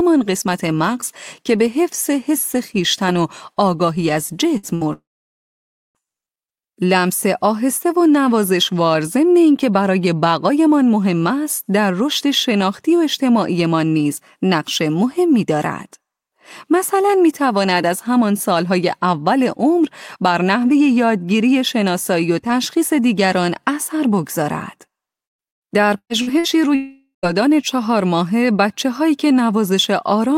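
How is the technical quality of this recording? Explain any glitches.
The recording has clear network damage. It comes in two clusters, one near 5 seconds and one near 26 seconds.

Burst of packet loss, at 4.57 to 4.66 s and again at 4.75 to 4.84 s. Each time, about 60 ms of speech never arrived. The receiver stretched the last sound across the hole and faded it down. That gives a brief buzz or hiss. Then the speech jumps ahead, and the missing piece is simply gone.

Long network dropout, at 4.93 to 5.98 s and at 26.75 to 27.26 s. The sound carries on briefly as a fading buzz, then goes quiet. In the first case, about a second is lost, and around 0.9 s of that is silence. The second loses about half a second, with roughly 0.13 s of silence. The likely cause is a stall in the connection, with no audio arriving during it.

Repeated packet loss (robotic sound), at 25.27 to 26.54 s. Here there are seven separate holes, the longest about 117 ms. 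Each one is patched by continuing the previous sound. The next hole comes soon after. About 37 percent of this stretch is filled-in sound rather than real speech. That makes the voice choppy, with pieces missing.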